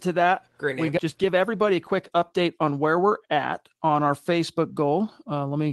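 At 0.97 to 0.99 s, just after "to that we", the speech lurches forward: the sentence continues as though a piece had been cut out, with no pause or filler across the join. This is a skip ahead. Roughly 0.7 s of audio never got played, either lost in transit or discarded by the jitter buffer when it overflowed while later audio was already queued, so the two sides of the gap are butted together.

From 1.24 to 2.59 s, leading into "on where we're at", the talker sounds slightly rushed, about 8% faster, yet the pitch stays where it was. This is a jitter buffer speed-up. After a burst of late packets arrived together, the buffer was holding more audio than its target, so the receiver trimmed out short pitch-period slices over and over, about a tenth of a second in total, to bring the delay back down.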